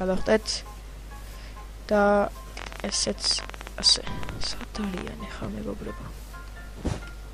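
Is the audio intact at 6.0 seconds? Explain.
Yes, the audio is intact at 6.0 seconds, with no dropout, click, distortion or other fault to be heard at that point.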